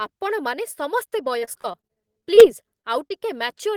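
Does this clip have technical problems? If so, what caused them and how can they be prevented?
Yes. From 1.39 to 2.43 s, repeated packet loss (robotic sound) leaves choppy speech with pieces missing. Gaps of up to 33 ms recur, with about a fifth of that stretch patched by extending the preceding sound. A more stable network path with a larger jitter buffer would prevent this.

At 2.81 s and 3.08 s, short concealed packet loss drops about 20 ms each time, heard as brief smears where the receiver briefly continued the previous sound. Adding forward error correction would recover such isolated losses.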